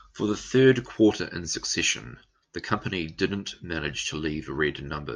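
No technical faults can be heard anywhere in this speech recording.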